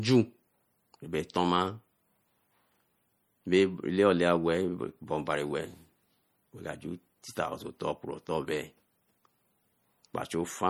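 Throughout the speech, plainly audible MP3 compression gives a watery, swirling quality, with chirpy s sounds and smeared onsets, which fits a low bitrate near 48 kbps. A spectrogram shows weak frequency lines blinking on and off between frames, leaving speckled gaps.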